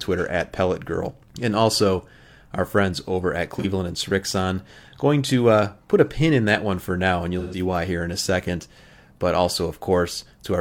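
AAC frame loss with concealment occurs at 3.59 s and again at 7.39 s. The decoder lost coded frames and filled each gap by reusing the last good spectrum with altered phase or smoothed energy. The first gap lasts about 43 ms, which fits a single lost frame, and sounds like a brief smeared, noisy blur. The second runs from 7.39 to 7.59 s, about 128 ms, which points to three consecutive frames, and it produces a longer phasey, washed-out patch.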